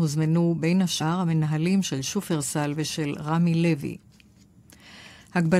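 At 1.0 s the speech is interrupted by a brief blip, the sign of damaged data in a compressed stream. A short run of bytes in the encoded file was corrupted, so the decoder could not read the affected frame correctly. It lost synchronisation and scanned forward for the next valid frame header before resuming normal output. The result is a very short, abrupt glitch lasting under 20 ms, with clean decoding immediately after.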